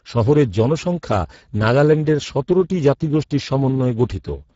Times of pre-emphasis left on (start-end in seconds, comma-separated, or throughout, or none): none